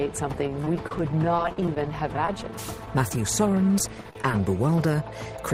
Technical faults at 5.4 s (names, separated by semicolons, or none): none